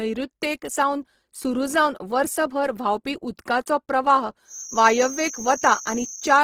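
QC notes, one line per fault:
Throughout, Opus compression. The speech sounds grainy and rough, with a noisy fizz over its tones and few swirly holes. The damage is plainly audible. This likely comes from Opus in its music mode at a rate near 16 kbps, filling starved bands with noise. The band stays full, up to about 20.2 kHz.
4.44 s to the end at 6.44 s, feedback whistle. Right after "वर्सभर व्हांवपी उदकाचो प्रवाह", a thin steady tone at 6.3 kHz appears, roughly 10 dB under the speech. It wavers a little in level but never runs away. A loudspeaker-to-microphone loop likely sits just short of full feedback.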